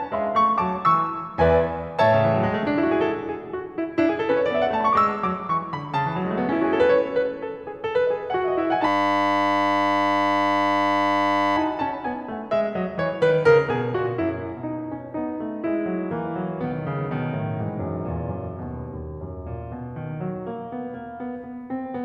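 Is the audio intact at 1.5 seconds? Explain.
Yes, at 1.5 seconds the music plays through intact, with no dropout, click, distortion or other fault to be heard at that moment.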